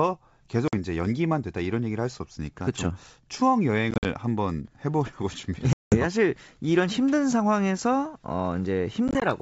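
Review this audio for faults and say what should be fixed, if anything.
Packet loss on an ADPCM call: packets go missing and the gaps are filled with silence, so the decoder's adaptive predictor and step size drift from the sender's. Each loss is a hard-edged hole, after which the speech returns slightly distorted before settling. The holes fall at 0.68–0.74 s (50 ms), 3.91–4.06 s (90 ms scattered, longest 50 ms), 5.73–5.97 s (190 ms) and 9.08–9.23 s (60 ms scattered, longest 20 ms). Add packet loss concealment that also resets the ADPCM decoder state, and reduce loss on the network path.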